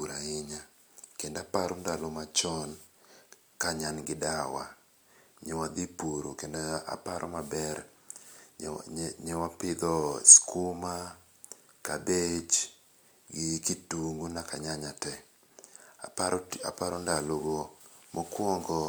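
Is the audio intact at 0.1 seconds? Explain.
Yes, the speech at 0.1 seconds is intact, with no fault at that moment.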